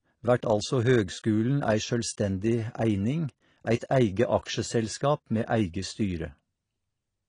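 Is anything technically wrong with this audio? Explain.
Yes. Throughout the speech, likely AAC compression: content stops near 10.1 kHz, leaving a flat spectrogram ceiling, and sparse quantised bands give a dull, warbling fizz, consistent with about 32 kbps.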